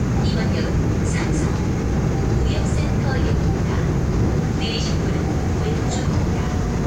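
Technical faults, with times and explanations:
Throughout, low bit depth with dither: the sound sits on a steady, even hiss, roughly 35 dB down, since 8-bit rounding with dither turns error into white noise.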